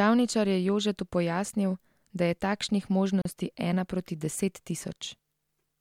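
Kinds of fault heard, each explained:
Gap at a join of encoded pieces: a 36 ms silence abruptly cuts the speech near 3.22 s, left by untrimmed encoder delay and padding where chunks meet.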